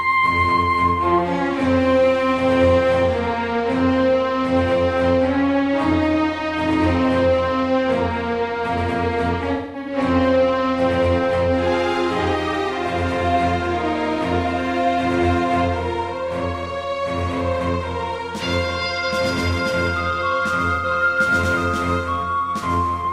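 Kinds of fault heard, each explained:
AAC frame loss with concealment: compressed frames went missing, and the decoder bridged each gap by reusing the last good spectrum with randomised detail. From 9.52 to 9.97 s, about 256 ms of audio is lost in scattered bursts, the longest roughly 0.2 s, and the sound turns smeared and noisy. A briefer phasey blur follows at 20.75 to 20.85 s. Unlike a plain dropout, the gaps hold a washed-out texture rather than clean silence.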